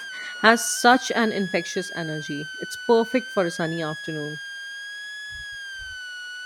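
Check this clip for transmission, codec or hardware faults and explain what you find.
A hardware fault runs through the whole clip: a switching supply whistle.

Throughout, a switching power supply near the recording chain is cycling at an audible rate, and its ripple leaks into the signal. Over the speech this comes through as a thin high whistle around 1.5 kHz, wandering between 1.45 and 1.73 kHz, sitting roughly 15 dB below the speech.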